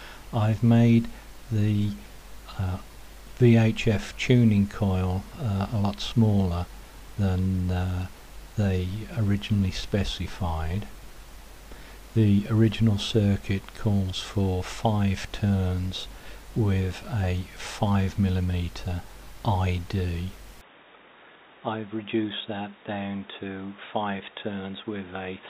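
At 20.61 s the sound abruptly turns dull and boxy until the end. Nothing above 3.8 kHz remains. The level falls by about 10 dB, with no gap at the change. A new noise floor appears, about 40 dB down. This likely points to the input switched to a poorer device.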